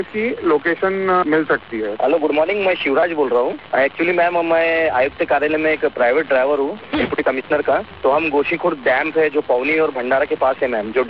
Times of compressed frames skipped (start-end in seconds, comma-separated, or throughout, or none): none